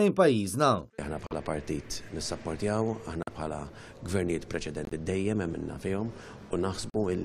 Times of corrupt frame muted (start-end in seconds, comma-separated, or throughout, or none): 1.27-1.32, 3.23-3.29, 4.85-4.93, 6.90-6.96